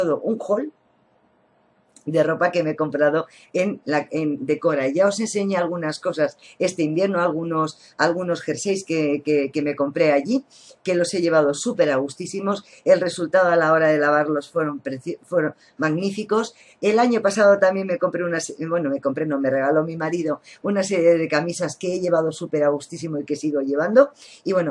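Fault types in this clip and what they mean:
No fault types can be heard in this clip.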